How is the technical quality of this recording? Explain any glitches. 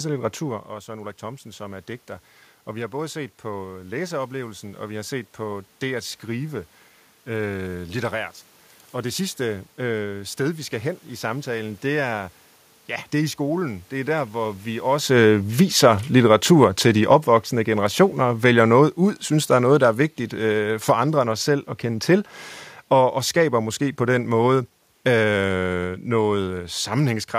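The main technical problem is automatic gain falling. From 15.02 s to 27.27 s the automatic gain control responds to input it judges too loud or too noisy and steadily reduces its gain, ending about 12 dB lower. Because the gain is applied to the whole signal, the speech and the room noise sink together. A talker moving relative to the microphone around 15 s also changes the level, but that is acoustic rather than a system fault.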